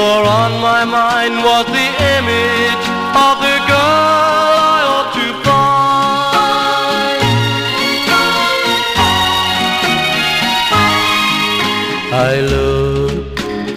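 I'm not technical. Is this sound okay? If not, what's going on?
No, there is one loud pop from 3.21 to 3.23 s, well above the surrounding sound, likely an electrical jolt. Unlike a dropout, the sound carries on underneath it.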